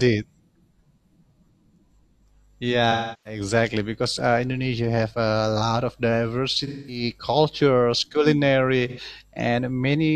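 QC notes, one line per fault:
2.91–3.40 s, 6.66–7.03 s (just before "cultures culinary") and 8.88–9.00 s (just after "cultures culinary"): AAC frame loss with concealment. Each gap is a smeared, noisy patch where the decoder rebuilt missing frames from the last good spectrum. The first gap lasts about a third of a second, which fits roughly eight lost frames.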